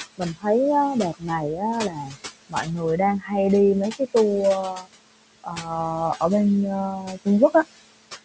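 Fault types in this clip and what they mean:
Noise suppressor artifacts: throughout, the suppressor pulls steady room noise down by about 21 dB frame by frame, so it sinks between phrases and rises underneath speech.
Speech cut by the noise suppressor: at 0.18–0.46, 1.13–2.17, 2.49–3.32, 4.74–4.87, 5.44–5.67 and 7.0–7.53 s, quiet speech mistaken for noise drops up to about 20 dB, sounding swallowed.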